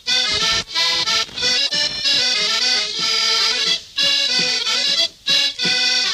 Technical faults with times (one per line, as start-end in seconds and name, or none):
1.66-1.72 corrupt frame decoded